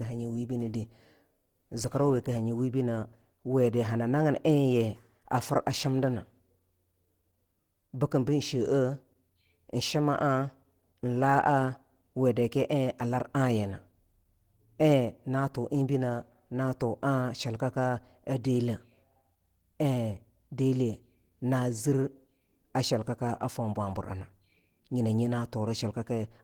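Opus compression runs throughout this speech clip, plainly audible as a muffled, hoarse, grainy texture even though content still reaches about 20.2 kHz. The likely cause is the encoder working in its hybrid speech mode at a bitrate around 16 kbps, too few bits to carry detail cleanly.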